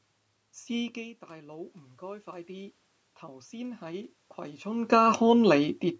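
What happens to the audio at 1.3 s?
At 1.3 s you're early in an automatic gain rise that runs from 0.93 to 5.07 s. The talker drifted away from the mic around 1 s, the input fell about 14 dB, and the gain control is slowly climbing about 7 dB to compensate, so voice and room noise swell up together.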